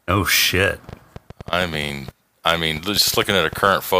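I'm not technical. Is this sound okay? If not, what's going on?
No. A train of clicks runs from about 0.89 to 3.68 seconds in this speech: roughly twenty sharp ticks at around seven per second, unevenly spaced, popping out above the talking. Likely cause: electrical interference from nearby equipment or a faulty connection or power supply injecting pulses.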